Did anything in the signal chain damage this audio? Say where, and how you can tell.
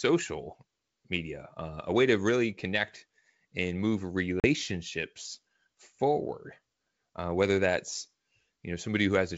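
Yes, packet loss on an ADPCM call, at the network stage, from 4.40 to 4.47 s, right after "really connect and move". The speech drops into a hard-edged silent gap about 40 ms long, which fits a couple of lost 20 ms packets. When sound resumes, it comes back slightly distorted before settling. That happens because the receiving decoder's adaptive predictor and step size drifted away from the sender's during the hole. The G.722 wideband coding underneath stays clear up to 7 kHz.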